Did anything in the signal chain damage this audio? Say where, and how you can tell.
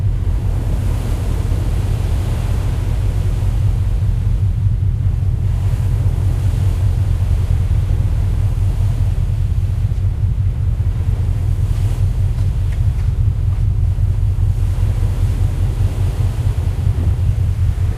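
Yes. From the start of the clip until 4.4 s there is a doubled audio track: a second, full-band copy of the sound trails the original by about 0.2 s at roughly 5 dB lower, with no decay or room colouring, and it cuts off abruptly at 4.4 s. This likely comes from the capture or mixing stage, where a slower second path or a misaligned edit layers the same material in twice.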